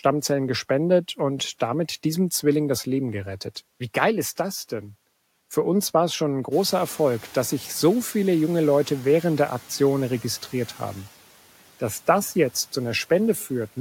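At 6.51 s the room noise jumps by about 15 dB, and the noise suppressor is caught up short: for 0.57 s the noise passes with little reduction, then sinks by about 5 dB. On a spectrogram, a bright band of noise appears near 6.5 s and visibly dims by 7.08 s.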